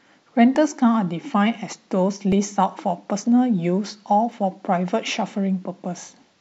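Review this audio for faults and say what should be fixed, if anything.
Two tiny skips at 2.32 s and 4.32 s come from overlap between stream segments: neighbouring segments, about 2 s long, claimed overlapping time, and the player trimmed real sound, removing roughly 17 ms and 9 ms. The waveform shows an abrupt step, the spectrogram a thin vertical broadband line. To prevent it, the packager should write segment timestamps that abut exactly, so the player has no overlap to discard.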